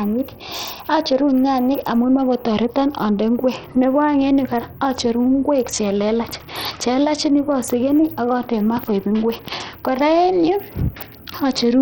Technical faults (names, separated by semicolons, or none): Bluetooth SBC compression